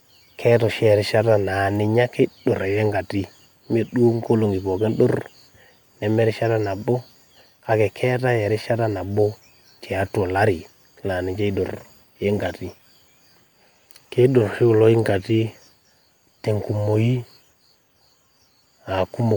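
From start to finish, the speech carries generation loss. The sound is swirly and smeared, with a hollow quality. Consonant attacks blur rather than snap. This is more damage than a single MP3 pass near 127 kbit/s would leave. It likely comes from repeated decoding and re-encoding, about five passes. Each pass quantises on a shifted frame grid, so noise and spectral holes pile up. Nothing remains above 20.2 kHz.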